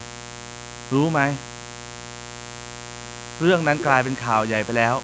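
From the very start to the end of this speech clip there's a mains buzz, a steady raspy hum sitting roughly 15 dB under the voice. It's built on 60 Hz: something like a dimmer, a rectifier or a missing shield is letting sharp switching spikes in twice every mains cycle, and their harmonics climb into the kilohertz range. Nothing comes through above 8 kHz, the limit of the call microphone processing.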